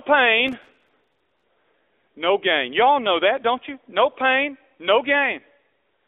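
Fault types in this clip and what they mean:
AMR narrowband mobile codec, throughout: the sound is squeezed into a phone line from 300 Hz to 3.6 kHz and rebuilt from a vocal-tract model driven by sparse pulses. The plainly audible buzzy, synthetic edge suggests a mid-rate mode of around 10 kbps.
Processor overload crackle, 0.48 to 1.43 s: a processor running behind misses dozens of audio deadlines over a short stretch. Each miss replays a fragment of old audio, roughly 3 ms long, with hard edges, and together the fragments make a gritty crackle riding on the speech.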